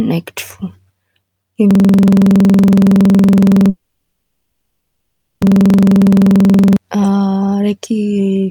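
At 1.71 s the audio locks into a system hang loop: one 46 ms slice repeats until 6.76 s, buzzing at 21.5 Hz, which fits a 2048-sample buffer cycling while the machine froze. From 3.69 to 5.43 s there's a 1.72 s stall that fades and then sits silent for about 0.9 s, likely a call audio freeze, and nothing is lost when the audio picks back up.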